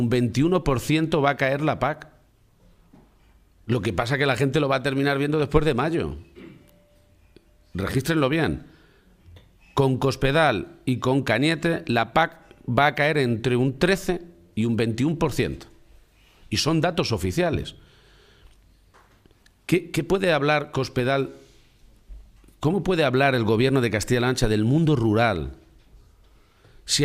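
Weak DAB reception let bit errors slip into the MP2 data, so short blips of noise appear in single sub-bands from 5.40 to 5.44 s: a brief DAB burble.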